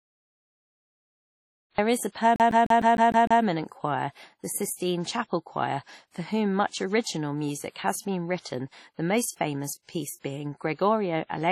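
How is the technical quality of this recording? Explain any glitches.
The technical quality is poor. Heavy coding damage runs through the whole recording, the start is cut off, and there is a skipping stutter early on.

The damage throughout is likely WMA compression at a low bitrate, around 32 kbps. The speech sounds ringing and washy. A hiss rises and falls with the voice. Nothing is present above about 15.1 kHz. This transform codec quantises the signal in long blocks, so its noise smears across tens of milliseconds around each sound. At this low rate, weak spectral detail is simply discarded.

The cut-off start covers 0.0 to 1.78 s. The clip opens in digital silence. The speech then appears abruptly at 1.78 s, just before "is a". It begins mid-sound, with no natural attack or fade-in. This happens when a recording or stream begins late. The first moment captured is already partway through the speech.

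The CD stuck on one turn occurs from 2.36 to 3.43 s. It starts just after "is a" and ends just before "choir the sistine chapel". The same 152 ms fragment plays seven times, with a short mute at each jump. The result is a fast, even stutter. A scratch throws the laser back one track at the same spot on every rotation, so playback keeps returning to that instant.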